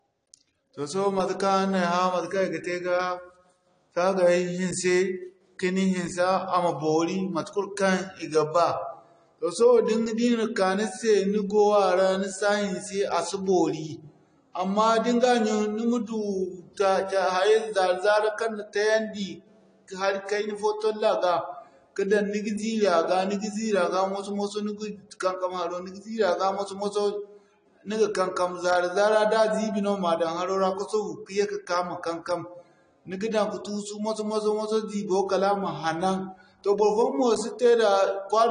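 Speech, and the whole clip carries plainly audible AAC compression damage, most likely from AAC-LC at a low rate; the dullness fits something around 32 kbps. At that budget the encoder throws away the top of the spectrum and leaves gaps in what it keeps, so the voice sounds muffled and smeared from start to finish, and sibilants and held vowels pick up a watery, fizzy warble where bands get coarsely quantised or filled in.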